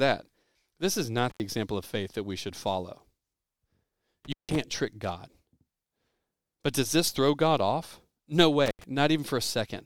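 The speech drops out with crackle at each edge and faint hiss in the gaps at 1.30–1.40 s (just before "example of faith that", open 84 ms), 4.25–4.56 s (160 ms) and 8.66–8.84 s (81 ms): intermittent contact, a loose cable or plug briefly opening.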